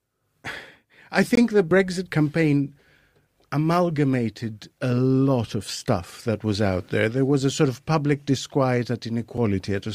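At 1.35 to 1.37 s, and at 9.37 s after "sort of public disquiet", a gap between stream segments leaves a hard-edged silent hole.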